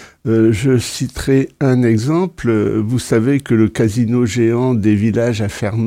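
Nothing goes wrong anywhere in the audio, so there's no technical fault to point to here.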